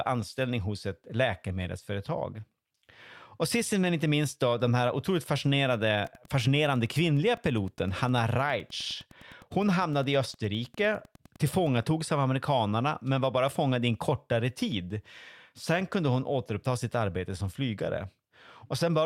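The clip is speech with two technical faults. There is an overlap between stream segments at 2.74 s and again at 14.72 s. Each is a tiny click or skip. Two 4-second segments carry overlapping time stamps, so the player trims audio that was never duplicated and the waveform jumps. From 6.0 s to 11.9 s there is Wi-Fi interference. A faint, steady ticking sits well below the speech. It repeats every 102.4 ms, the beacon interval of a nearby Wi-Fi radio, whose bursts the audio circuit rectifies into sound.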